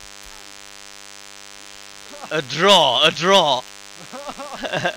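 DECT cordless phone buzz runs through the whole clip: a thin, steady buzz at 100 Hz with a dense stack of harmonics, sitting roughly 25 dB below the main sound. A DECT handset or base station close to the recording chain transmits a short radio burst every 10 ms. A nonlinear junction in the audio circuitry rectifies each burst into a small pulse, and the pulse train becomes an audible, harmonic-rich tone at the burst rate.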